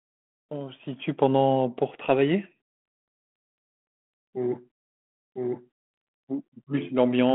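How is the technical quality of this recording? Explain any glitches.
The recording comes through a telephone-band G.726 ADPCM path, with nothing above 3.8 kHz. One glitch stands out. From 5.36 s to the end, a doubled audio track appears. An equally loud copy runs about one second behind. It starts abruptly, likely from a second, slower capture path.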